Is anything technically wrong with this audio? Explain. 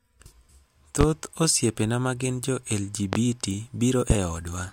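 Yes. A loud pop occurs three times, at 1.01 to 1.05 s, 3.13 to 3.17 s and 4.10 to 4.14 s. Each is a single sharp pop lasting under 40 ms and reaching roughly 20 dB above the speech, which carries on underneath. The likely cause is a brief voltage pulse from a switch, plug, static discharge or driver glitch. On the waveform each shows as a tall isolated spike, and on a spectrogram as a thin vertical stripe across all frequencies.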